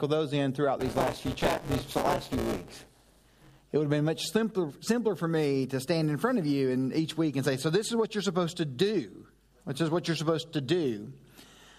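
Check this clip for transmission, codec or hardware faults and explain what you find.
One hardware-path fault is present: buffer tearing from 0.80 s to 3.63 s. The write and read positions in the playback ring buffer have drifted until they cross inside each period, so roughly a third of every buffer carries audio from one lap earlier, about 20 ms old, spliced in with hard joins on both sides. The result is a steady robotic buzz at 172 Hz riding on the sound, which fits a 256-sample buffer.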